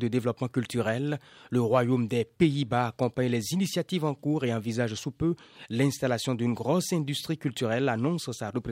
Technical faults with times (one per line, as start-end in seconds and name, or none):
none